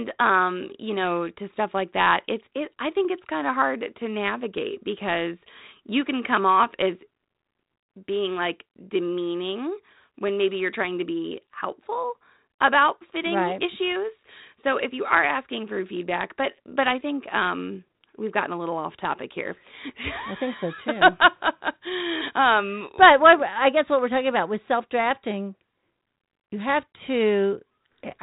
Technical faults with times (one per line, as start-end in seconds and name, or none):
none